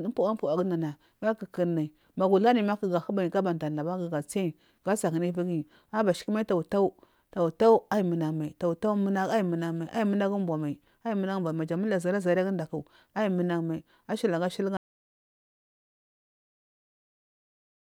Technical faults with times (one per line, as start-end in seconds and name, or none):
14.77-17.89 audio dropout to silence